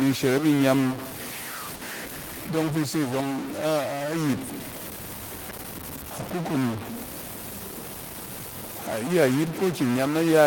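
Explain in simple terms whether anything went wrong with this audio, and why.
A stuck bit runs through the whole recording: the speech has a noisy, distorted edge, and even the pauses carry a gritty noise. The likely cause is one digital bit frozen at a fixed value, so many samples come out wrong and hiss fills the quiet parts.

A burst of packet loss happens from 1.75 to 1.84 s. Part of the stream never arrived, so the player stretched the last sound for about 60 ms, fading it into a brief buzz or hiss. Playback then skips ahead, and about 60 ms of speech is missing.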